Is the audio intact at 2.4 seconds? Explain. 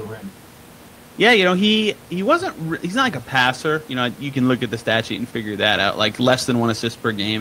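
Yes, the audio is intact at 2.4 seconds, with only the room's own background noise, about 26 dB below the speech, present beneath it.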